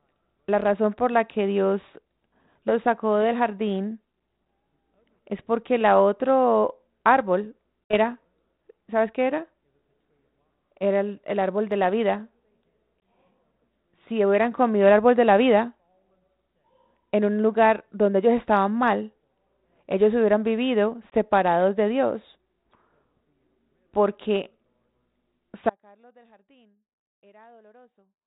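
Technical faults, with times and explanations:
7.85–7.94 s, 13.0 s and 21.1–21.18 s (just after "ellos hubieran vivido"): packet loss on an ADPCM call. Lost packets, about 60 ms at the first and 20 ms at the others, were filled with silence, leaving abrupt holes. The decoder's predictor then restarts out of step with the sender, so the speech returns with a brief click or distortion.
25.7 s to the end: audio dropout to a faint residue, likely from the signal path breaking while the line stayed open. The speech cuts off abruptly, leaving only a faint sound about 30 dB down.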